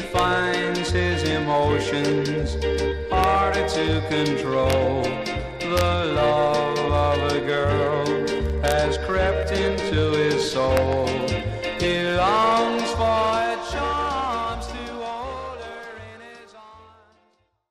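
Sharp, violent cracks burst out of the louder moments at 0.19 s, 3.24 s, 4.70 to 4.73 s, 5.78 to 5.81 s, 8.68 to 8.72 s and 10.77 s, far harsher than ordinary clipping. This is integer overflow: the peaks are pushed only about 1 dB or less past full scale, yet instead of being held at the limit, the samples wrap around to the opposite extreme, so each overshoot snaps across the whole range.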